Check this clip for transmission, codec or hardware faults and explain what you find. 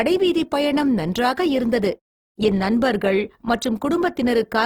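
One codec fault runs through the whole speech clip.

Opus compression, throughout: the damage most likely comes from Opus in its music (CELT) mode at a low rate, fitting about 16 kbps. Band energies are kept and starved bands are filled by folding or noise, so content reaches 20.2 kHz while the speech sounds plainly rough and grainy.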